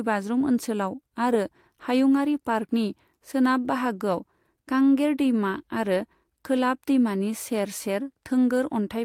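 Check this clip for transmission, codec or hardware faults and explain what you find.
No faults can be heard anywhere in this speech.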